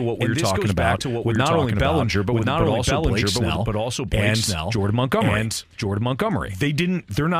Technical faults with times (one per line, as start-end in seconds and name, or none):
0.00-7.39 doubled audio track